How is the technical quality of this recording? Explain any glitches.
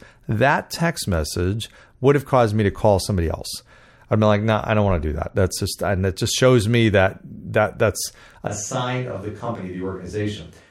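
The recording has one clear glitch near the end. From 8.47 s to the end, it likely switches to a distant microphone: the close microphone drops out, so the speech turns suddenly roomy and hollow, loses bass, falls about 5 dB, and reveals faint background noise.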